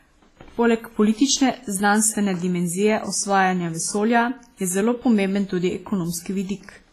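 Right through the speech there's heavy damage from what's likely WMA compression: nothing above 15.5 kHz, and a ringing, washy hiss that breathes with the voice as long transform blocks smear quantisation noise over tens of milliseconds, which fits a bitrate around 24 kbps.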